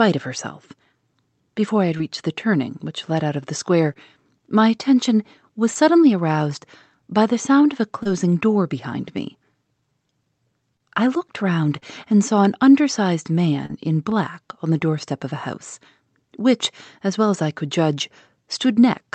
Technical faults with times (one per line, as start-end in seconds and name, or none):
1.97-2.01 short concealed packet loss
3.93-3.97 short concealed packet loss
5.73-5.77 short concealed packet loss
8.03-8.07 short concealed packet loss
10.77-10.81 short concealed packet loss
11.79-11.84 short concealed packet loss
13.66-13.71 short concealed packet loss